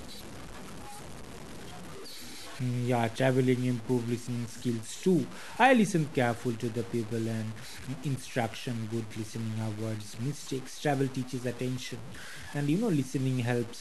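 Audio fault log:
Throughout, low bit depth without dither: the speech sounds grainy and gritty, worst in quiet moments where it sputters or drops out. Likely truncated to about 6 bits, error roughly 20 dB below.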